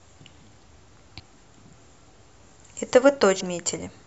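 Whole frames of the compressed speech never reach the output, either lost from the file or rejected by the decoder as damaged, so playback jumps forward. These compressed frames skipped occur at 1.19 s, where roughly a tenth of a second disappears, and from 3.39 to 3.41 s, where about 300 ms vanishes, which suggests a run of a dozen or more 23.2 ms frames.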